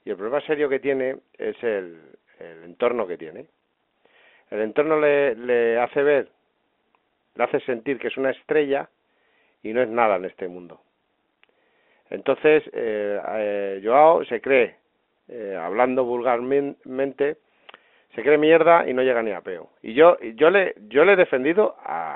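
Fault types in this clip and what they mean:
Nothing stood out on listening to this speech, which comes over the band-limited sound of an ordinary telephone line.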